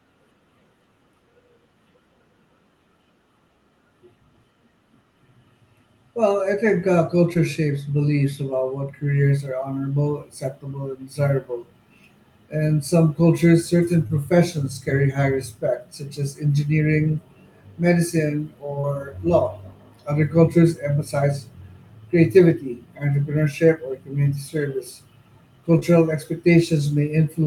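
Speech with short concealed packet loss at 7.33, 14.07, 18.81 and 25.79 s: about 20 ms went missing each time and was patched by extending the preceding sound, which shows as a brief smeared, flattened patch in the spectrogram and a short stretch of repeated waveform.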